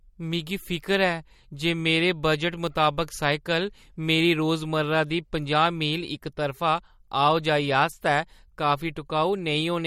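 From start to end the speech carries a watery, swirling quality, with s sounds turning metallic and consonant onsets smeared, and nothing is present above 18.8 kHz. This is likely MP3 compression at a low bitrate, the damage pointing to roughly 48 kbps. Starved of bits, the encoder drops frequency lines its hearing model judges unimportant, so weak detail flickers in and out between frames, and it caps the treble at that fixed ceiling.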